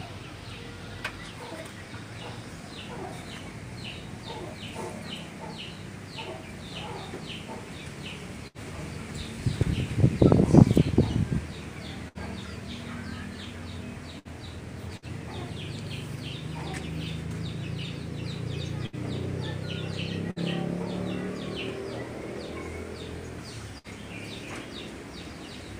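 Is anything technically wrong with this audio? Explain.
Yes. Seven short dropouts briefly hold and fade the preceding sound before the audio jumps ahead, at 8.47, 12.08, 14.19, 14.97, 18.86, 20.31 and 23.78 s. This is a burst of packet loss: each time, the receiver padded a gap with about 55 to 70 ms of extended, fading sound, and 60 ms of the original audio was lost.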